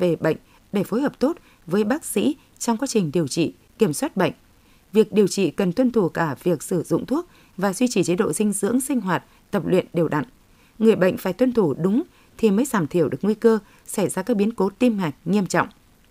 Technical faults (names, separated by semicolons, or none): low bit depth without dither